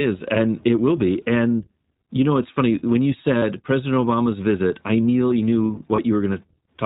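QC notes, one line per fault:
throughout, iLBC codec: nothing above 4 kHz, with a slightly rough, synthetic edge to the speech. That fits iLBC's 15.2 kbps mode, with each 20 ms frame coded on its own.
3.38–3.43 s and 5.96 s, lost iLBC frames: a 40 ms gap, then a 20 ms one, each filled by a brief buzzy, held vowel where the decoder repeated the last pitch cycle with noise. Speech snaps back right after each one.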